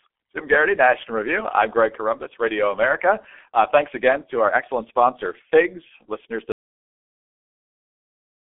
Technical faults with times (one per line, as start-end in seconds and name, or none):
0.00-8.57 G.723.1 codec
6.52-8.57 audio dropout to silence